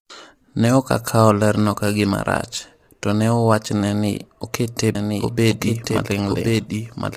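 Low-delay AAC compression runs through the whole recording, with plainly audible damage. The speech sounds rough and grainy, with noise filling the gaps between harmonics and an upper band that seems thinned and slightly artificial. The likely cause is a low-delay codec such as AAC-ELD, which fits a bitrate around 32 kbps. Its very short frames cannot separate closely spaced pitch harmonics well, so at that rate detail is lost and replaced by noisy fill.

A doubled audio track appears from 4.95 s and lasts to the end of the clip. A second copy of the speech joins abruptly at about the same loudness as the original, trailing it by roughly a second. That copy is dry and full-band, with no decay or room colour, so it sounds like the same speech talking over itself. This is likely caused by a slower capture path or an edit leaving two out-of-step copies mixed together.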